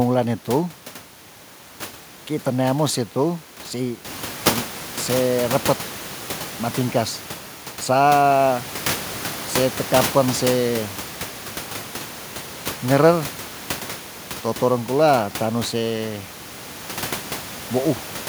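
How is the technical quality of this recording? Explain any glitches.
Nothing stood out as a problem on listening to this speech recording, though the background noise of the room rises by about 10 dB around 4 s and then sits about 14 dB below the speech, which belongs to the recording itself rather than to the system.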